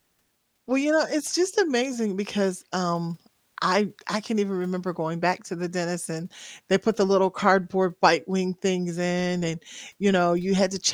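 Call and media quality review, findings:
Nothing stood out on listening to the speech recording; no findings to log.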